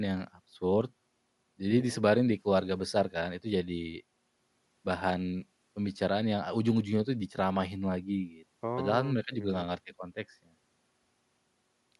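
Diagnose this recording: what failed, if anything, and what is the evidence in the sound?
Across the whole clip the speech's upper band sounds breathy and grainy, a codec-stage fault, likely Bluetooth LC3 compression. The transform coder zeroes upper bands and refills them with noise, so unlike a plain low-pass the top is hissy rather than absent. The texture fits 10 ms frames near 48 kbps.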